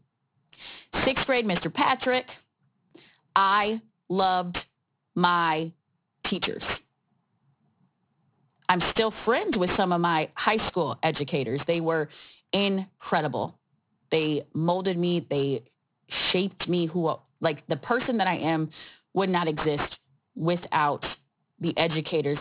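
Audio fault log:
Throughout: aliasing. The audio was resampled down without an anti-alias filter, which fits a drop from 44.1 kHz to 8 kHz. Content above the 4 kHz fold point reflects back into the band as unrelated tones. Sibilants come out gritty and metallic, and the folded energy sits only about 10 dB below the speech. The spectrum runs at full level right up to the 4 kHz edge instead of rolling off.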